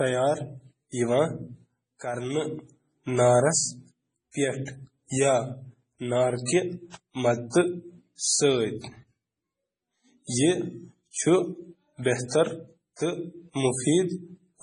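Speech with heavy MP3 compression damage throughout, likely from a very low bitrate around 24 kbps: nothing above 10.4 kHz, watery, swirling sibilants and smeared onsets. A spectrogram shows a hard ceiling at 10.4 kHz and blocky, flickering gaps where weak components drop out frame to frame.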